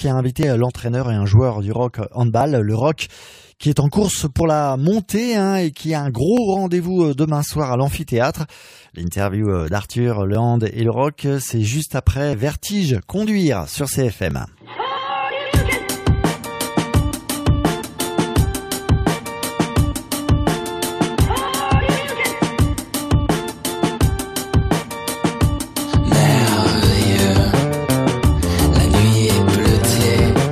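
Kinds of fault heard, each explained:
Overlap between stream segments: overlapping segment timestamps make the player discard milliseconds of sound, leaving waveform jumps and vertical spectrogram streaks heard as tiny skips at seven of the 2 s segment boundaries between 0.4 and 14.3 s.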